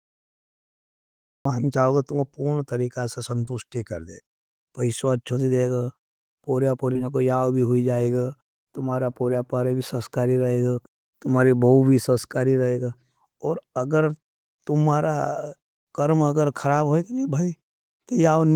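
The first 1.45 s is digital silence, a cut-off start: the recording began late, so the speech enters mid-sound with no attack right at "चाहोगा तुम्हों पुन तरीका". Two short concealed packet losses follow, at 3.45 to 3.49 s (between "तुम्हों पुन तरीका सा" and "कर दे") and 6.93 to 6.97 s. In each, about 20 ms never arrived and the decoder stretched the previous sound over the gap, leaving a quick smear. At 15.77 to 15.88 s there's a burst of packet loss: roughly 100 ms went missing, and the concealment holds and fades the last sound for about 90 ms before the speech jumps ahead to "कर्म अगर खाराब".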